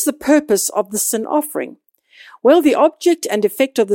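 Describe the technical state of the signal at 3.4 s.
At 3.4 s the speech signal is intact, with no audible fault at that moment.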